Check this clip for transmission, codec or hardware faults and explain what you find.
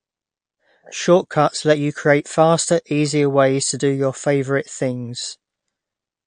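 One fault runs through the whole speech clip. It is MP3 compression, and it is plainly audible. Nothing comes through above 9.5 kHz, so the top of the treble is missing. That hard ceiling is the likely mark of an MP3 encoder starved of bits. The damage points to a low rate, around 48 kbps. At that rate the encoder trims the highs. It also drops weak frequency lines that flicker between frames. The result is a dull, watery texture.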